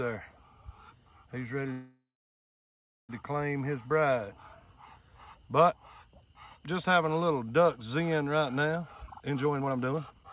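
At 1.72 s the sound stalls: the last bit carries on as a fading buzz, then about a second of silence, and it picks up at 3.11 s right where it left off. That's a call audio freeze, likely from packets held up until the jitter buffer ran dry, inserting roughly 1.37 s.

From 8.82 s to 10.24 s there's a jitter buffer speed-up. The receiver trims tiny pitch-period slices to shed around half a second of backlog, so the sound plays at 132% speed with unchanged pitch and feels rushed. Throughout, nothing reaches above 4 kHz, which fits a G.711 mu-law call path.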